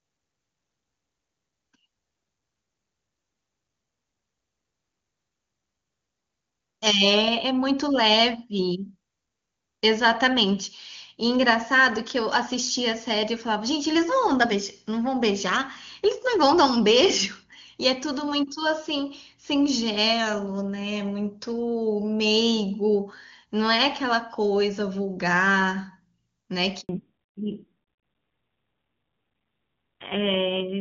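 Up to 26.81 s the call sounds like clean HD Voice at what seems to be a high AMR-WB rate, and then there's a handover gap: the speech drops out for about 80 ms, up to 26.89 s, while the phone switches networks and no frames get through, so whatever was said in that slot is simply gone.

Right after the gap, from 26.89 s to the end, there's a fallback to narrowband. The call lands on a low-rate AMR narrowband codec, which fits something around 7.4 kbit/s, so nothing above 4 kHz survives. The voice turns noticeably duller and a bit rougher.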